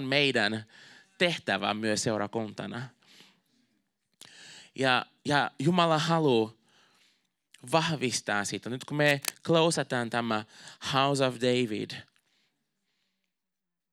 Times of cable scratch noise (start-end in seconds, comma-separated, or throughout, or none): 9.04-9.34